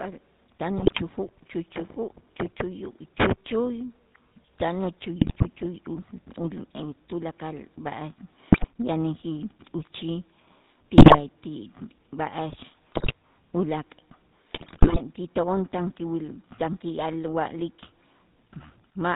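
A speech recording that has passed through the GSM full-rate codec at 13 kbps, which rebuilds the voice from a vocal-tract model driven by a sparse, regularly spaced pulse train. The result is plainly audible: nothing above 4 kHz survives, and the voice has a buzzy, gravelly roughness throughout. Underneath that, the signal was likely cut to very few bits by truncation without dither, consistent with about 8 bits. The rounding error tracks the signal at roughly 35 dB below it, so quieter passages turn grainy and the grit shifts with the sound. Corrupted bits on a weak radio link also reached the decoder in six bursts, at 0.78 to 1.03 s, 5.20 to 5.43 s, 8.52 to 8.67 s, 10.98 to 11.19 s, 12.92 to 13.14 s and 14.52 to 15.02 s. These GSM bit errors scramble the filter, pitch and gain data for several frames, so the voice breaks into squawks, pops and gargling at those moments.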